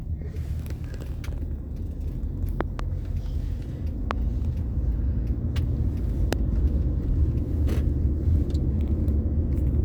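A loud pop hits at 2.61 to 2.81 s as two quick thumps, then singly at 4.11 to 4.13 s and 6.33 to 6.35 s, each far above the sound. These are likely voltage spikes, and unlike dropouts, the sound carries on uninterrupted beneath them.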